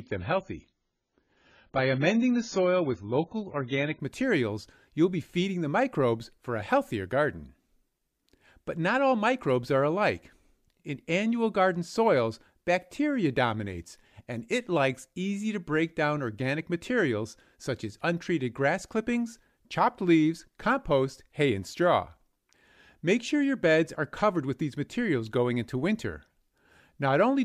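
From 0.0 to 4.0 s the audio is dull, with nothing above 7 kHz and stronger codec artefacts, which points to an adaptive stream starting at a low bitrate. It then steps up to AAC-LC 96 kbit/s suddenly with no gap, which separates it from a mid-stream dropout or recovery.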